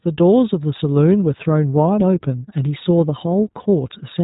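From start to finish the speech carries the iLBC codec sound. Nothing above 3.8 kHz survives, and independently coded 20 ms frames leave it plainly rough and synthetic.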